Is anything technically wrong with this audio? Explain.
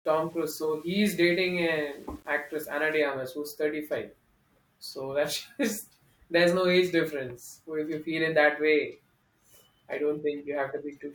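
Yes. From the start to about 3.02 s the speech has a grainy, gritty edge that rides along with the voice and gets harsher as it quietens, with the softest bits breaking up or dropping out. It sounds like low bit depth without dither: the samples were likely rounded to very few levels, which fits an 8-bit path, with no noise added to smear the steps. The error sits only about 35 dB under the speech and tracks it, so it comes across as distortion rather than hiss.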